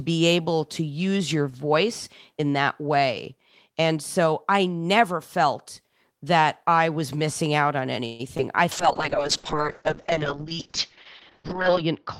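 At 8.05 s, just after "was missing out on", a call audio freeze fills about 0.14 s with fading continuation. Delayed packets likely emptied the jitter buffer. Speech then resumes intact, only later.

From 8.37 to 8.40 s comes short concealed packet loss. About 20 ms is gone. The decoder bridges part of it with extrapolated sound, leaving a brief smear.

At 8.73 s a call bitrate drop sets in and lasts to the end. The rate falls from 32 to 6 kbps and bandwidth narrows from 20 kHz to 8 kHz. The speech turns coarse and muffled.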